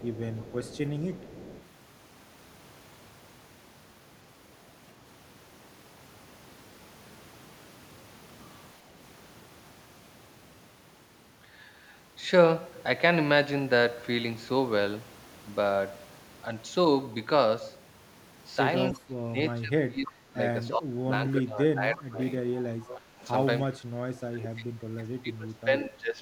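Echo leak at 0.0 to 0.78 s, 1.11 to 1.67 s, 20.06 s and 22.87 s: a faint copy trails the sound by 316 ms, about 15 to 20 dB down. It is likely loudspeaker pickup that the echo canceller did not remove, and it appears on a spectrogram as ghostly repeated patterns.

Speech suppressed in double talk at 18.92 to 20.38 s, 20.69 to 22.42 s, 22.89 to 23.26 s and 24.3 to 26.19 s: overlapping talk likely made the canceller duck this talker. The speech dips by up to about 25 dB and dulls or breaks up, showing as sudden waveform troughs and spectrogram gaps.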